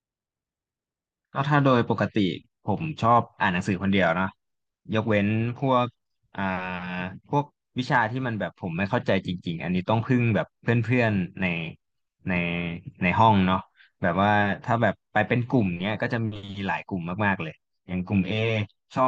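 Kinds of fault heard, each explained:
Channel delay (comb filtering): from 17.63 s to 19.08 s, one channel runs roughly 10 ms behind the other, and summing them cancels shared content at evenly spaced frequencies, from about 50 Hz and then every 100 Hz or so, leaving the speech hollow and phasey.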